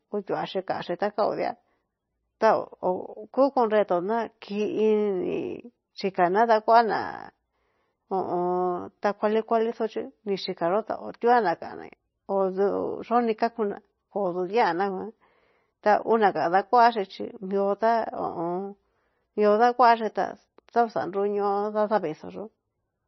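From start to finish the speech carries heavy coding damage, most likely from MP3 compression at a very low bitrate, in the region of 24 kbps. Nothing is present above about 5.9 kHz, so sibilants and consonant detail sound dull and lisped. With so few bits available, weak frequency components drop in and out from frame to frame, giving a watery, swirling texture around the voice and smeared, soft-edged onsets.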